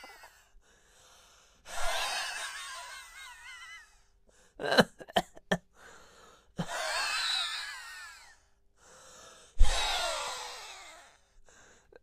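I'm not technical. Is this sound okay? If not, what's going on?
Yes, no faults can be heard.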